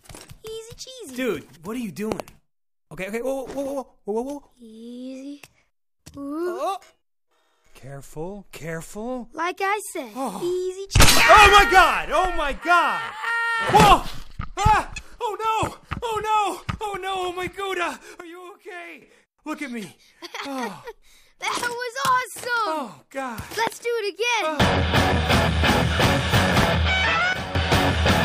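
There are loud pops here: a quick double pop between 2.12 and 2.22 s, then single ones at 23.67 and 26.63 s, each jumping something like 15 dB above the material while the sound carries on underneath. That sharp thump-on-top character points to a voltage spike getting into the chain, likely a switch, connector or static discharge, with the downstream circuitry shaping each hit into a short pulse. There are also two sudden gain jumps, where everything, background noise included, drops about 12 dB in one step with no fade: from 18.20 to 19.02 s and again from 27.33 to 27.55 s, with the level snapping back afterwards. That hard edge likely comes from a digital gain setting applied instantly rather than ramped.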